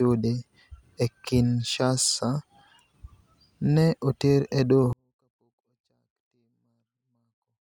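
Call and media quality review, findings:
24-bit alignment error (too quiet). Speech drops abruptly at 4.93 s, right after "oter e", and stays nearly inaudible to the end of the clip. Level falls by about 48 dB in one step, with no distortion and the timbre intact. Probable component: sample-format conversion. The 24-bit samples sit in the low bytes of a 32-bit word but are read as full 32-bit integers, so every value reads 8 bits (48 dB) too small.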